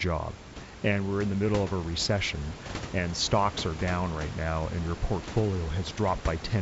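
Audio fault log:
Nothing to log here, since no faults turn up anywhere in this speech clip.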